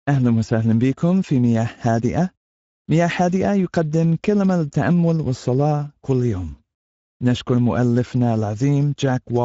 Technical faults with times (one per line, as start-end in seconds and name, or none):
0.00-9.45 Speex codec